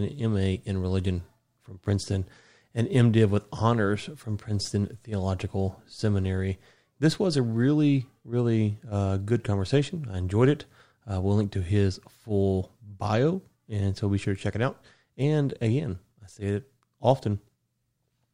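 No technical faults occur at any point in the recording, so there is nothing to describe in time order.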